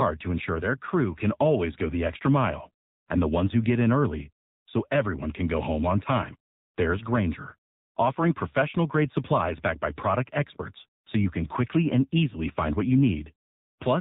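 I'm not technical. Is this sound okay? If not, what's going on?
No. The whole recording has gone through an AMR narrowband mobile codec, the kind used for older mobile phone calls. The damage is plainly audible from start to finish. Everything above 4 kHz is cut off, so the voice sounds muffled and thin, like a phone line. This clip was squeezed into very little data. That makes the voice sound buzzy and robotic, because the codec rebuilds the speech from a simplified model.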